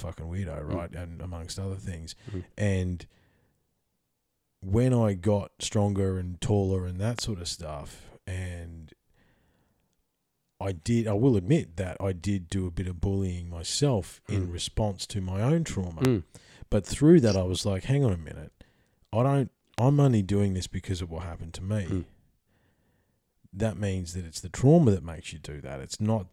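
A brief voltage spike, likely from a plug, switch or static discharge, adds a loud pop at 7.19–7.21 s, 16.05–16.07 s and 19.79–19.81 s. Each is a single sharp click roughly 15 to 20 dB above the speech, which carries on underneath.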